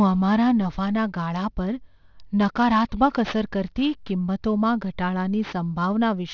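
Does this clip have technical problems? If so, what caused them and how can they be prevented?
Yes: throughout the speech, aliasing makes sibilants gritty and metallic, because content above 6 kHz folded back when resampling skipped filtering, which fits a drop from 48 kHz to 12 kHz. Applying an anti-aliasing low-pass filter below the new Nyquist frequency before downsampling prevents this.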